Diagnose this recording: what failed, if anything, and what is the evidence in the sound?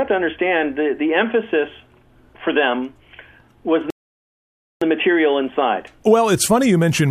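Playback rebuffering stall: audio stops at 3.90 s, silent until 4.82 s, then resumes seamlessly, adding 0.91 s; the waveform shows a flat gap, the spectrogram a blank vertical band.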